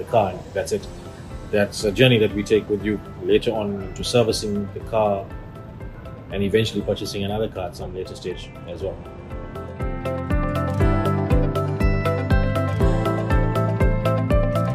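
From 1.05 to 5.65 s, sample clock jitter adds a grainy hiss that swells on loud, bright passages and disappears in quiet gaps. A wobbling converter clock, around a microsecond of timing error, leaves noise roughly 45 dB below the sound, visible as a diffuse high-frequency haze tracking louder segments.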